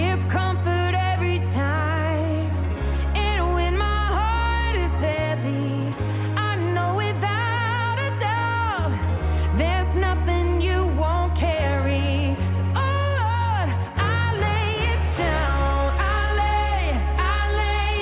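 No technical faults are audible anywhere in the recording. Nothing in the sound points to a break, glitch or distortion at any moment.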